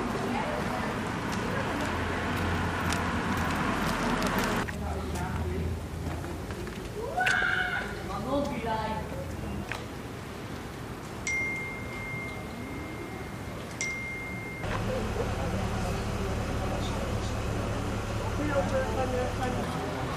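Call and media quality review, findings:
No audible faults found in this recording.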